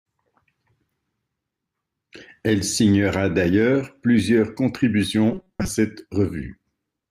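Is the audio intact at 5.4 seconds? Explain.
No. From 5.31 to 5.68 s the speech has robotic sound from repeated short buffers. The likely cause is new audio arriving too seldom, so the last few milliseconds are looped to fill the gaps while most of the real signal is dropped. The repeats impose a rigid, metallic buzz at 188 Hz, a period of about 5.3 ms. On a waveform, identical short cycles repeat; a spectrogram shows evenly spaced harmonics at multiples of 188 Hz.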